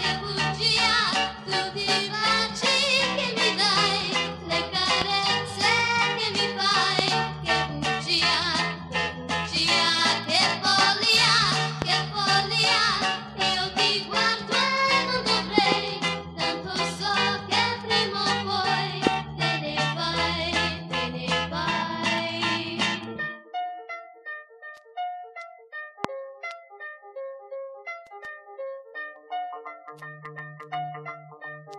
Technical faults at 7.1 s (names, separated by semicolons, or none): loud pop